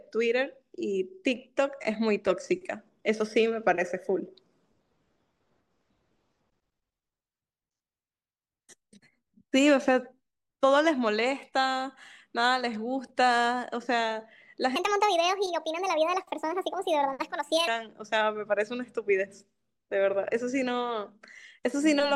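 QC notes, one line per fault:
14.76 to 17.68 s, section at the wrong speed: for just under 3 s the speech runs at 1.44 times its proper rate, so it comes out hurried and pitched up by roughly seven semitones, a perfect fifth, with timbre and pace shifting together. Both return to normal at 17.68 s. Because speed and pitch move as one, this is resampling rather than time-stretching, most likely a segment fitted to the wrong clock during editing or playback.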